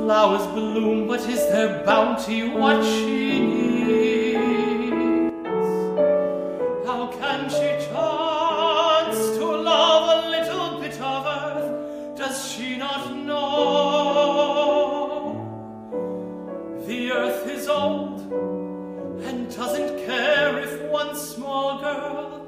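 At 5.29 s there's a sudden gain jump: the whole level drops by about 8 dB in an instant and stays down right through to the end. The background noise falls along with the sound, so it's the gain that moved, not the source. Most likely a gain setting or bit shift was applied between one sample and the next with no ramp, which is why the change is a hard step rather than a fade.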